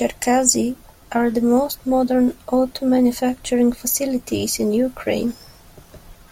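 Nothing technically wrong turns up anywhere in this short speech recording, so there's no time or cause to point to.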